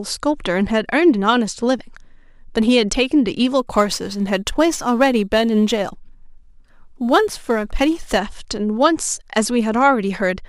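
Crude rate conversion affects this speech recording from 3.59 to 8.18 s. In that stretch, samples have been dropped to change the rate without any anti-aliasing filter, a pattern that fits a conversion from 48 kHz to 44.1 kHz. The skipped samples recur at a fixed pattern set by the ratio of those two rates, producing spurious inharmonic tones roughly 30 dB below the speech. These are heard as a gritty fizz that rides on the louder and brighter sounds.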